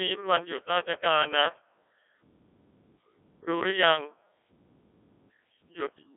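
Throughout, a Codec 2 vocoder rebuilds the speech from pitch and envelope as buzzy, robotic sine tones, which fits roughly 1.6 kbit/s. Simple band-limiting would keep the waveform instead.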